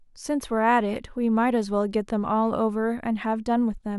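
No technical faults can be heard in this recording of speech. Nothing in the signal calls for comment at any point.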